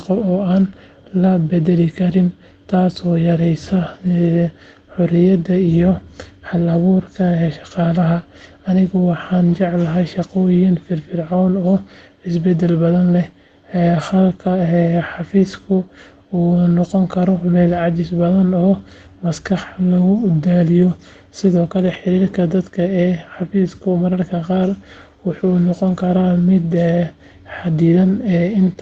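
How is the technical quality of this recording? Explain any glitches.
The speech comes through an Opus call path limited to about 8 kHz, with one glitch. A lost packet rebuilt from error correction at 21.85 to 21.95 s, just before "xiriirka dadka ee xafiiska": later packets carried low-bitrate copies, so about 60 ms plays rougher and noisier instead of dropping out, which fits three lost packets.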